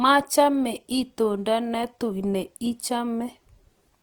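Throughout the speech the sound is coarse and grainy, with the tonal parts turned rough and noisy. This is likely Opus compression in its CELT music mode, at a rate that fits roughly 24 kbps. Starved bands are filled with folded or noise-like energy instead of being emptied. On a spectrogram the bandwidth stays full up to about 20.4 kHz with almost no holes, but the fine harmonic lines above the lowest bands smear into speckled, noisy texture.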